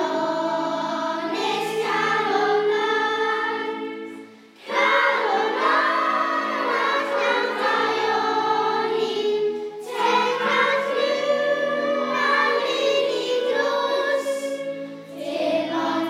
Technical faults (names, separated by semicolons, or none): none